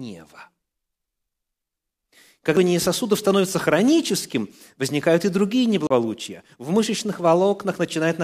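At 2.56 s, just before "сосудов становится хроническим возникают", a CD skip produces a tick and a mute of only a few milliseconds. A knock or a flaw on the disc threw the laser onto another turn of the spiral, so playback resumes from a different place. A second CD skip runs from 5.87 to 5.91 s, right after "хроническим возникают и другие", with a longer mute of about 40 ms. What separates these from a plain dropout or lost packet is the displaced continuation: the sound carries on from elsewhere in the recording rather than simply returning after a gap.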